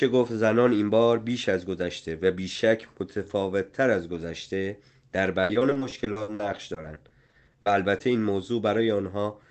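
A speech recording that turns choppy from 5.43 to 8.02 s because of repeated packet loss. Twenty-two gaps arrive in quick succession, the longest 60 ms, and each is patched by continuing the preceding sound, so roughly a quarter of that stretch is concealment. On a spectrogram the harmonics look smeared and repetitive, broken by abrupt discontinuities. The waveform shows looping, near-identical cycles interrupted by sudden jumps. Across the whole clip, the call codec's band limit appears as energy stopping near 8 kHz.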